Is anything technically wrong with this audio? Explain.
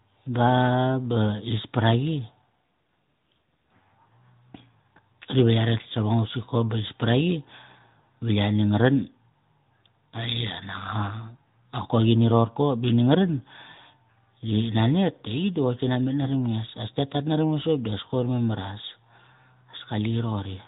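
Yes. Throughout, the speech has passed through the AMR narrowband mobile codec. It resamples to 8 kHz, so nothing above 4 kHz survives, and rebuilds the voice from a vocal-tract model fed by sparse pulses. The plainly audible buzzy, synthetic edge comes from coding at around 10 kbps.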